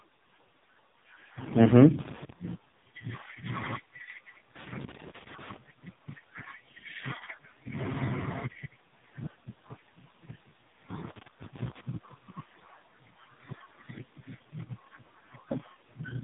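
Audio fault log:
Throughout: AMR narrowband mobile codec. Nothing above 3.8 kHz, and heavy buzzy, synthetic coloration consistent with a low-bitrate AMR-NB mode, around 5 kbps.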